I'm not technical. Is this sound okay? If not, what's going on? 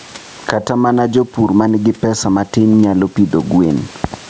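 No. All the way through, the level keeps swelling and dipping: each time the speech gets loud, the whole recording is pushed down. This is gain pumping. The likely cause is the microphone level being set far too high, so an automatic limiter keeps clamping down on it. Unlike a noise gate, which cuts the background to silence between phrases, this pulls the level down on every loud sound, and the speech sounds squashed and flat.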